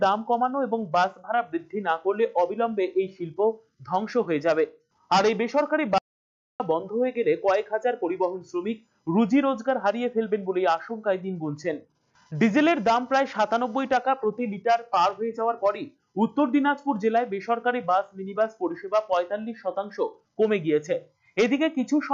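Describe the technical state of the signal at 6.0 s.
At 6.0 s the sound has cut out completely. An audio dropout to silence runs from 5.98 to 6.60 s, so about 0.62 s of material is simply missing. The signal stops abruptly in mid-flow and resumes just as abruptly, with no room tone or background in between. The likely cause is a loss of input upstream, such as a disconnected device, a failed link or an accidental mute, while recording carried on writing silence.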